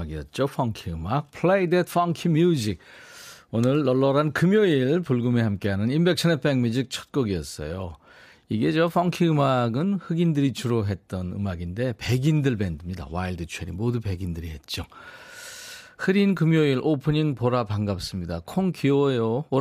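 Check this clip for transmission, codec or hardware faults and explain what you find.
Nothing faulty can be heard anywhere in this speech.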